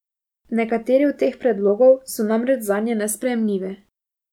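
No technical faults can be heard anywhere in the recording; the signal stays continuous and steady throughout.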